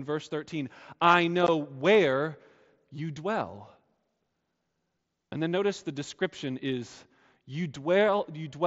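At 1.47 s, just before "where you dwell", the speech drops out in a brief hole of about 15 ms with hard edges. This is unconcealed Bluetooth headset packet loss: audio between headset and phone never arrived, which fits two lost packets, and silence or an idle pattern filled the gap, heard through the light graininess of the mSBC headset codec.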